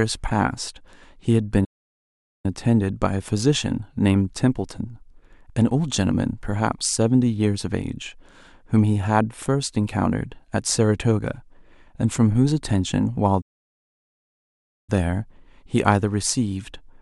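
Speech halts at 1.64 s for about 0.79 s and at 13.41 s for about 1.46 s, each a playback stall, likely from the player starving of data; waveform and spectrogram show flat, empty gaps.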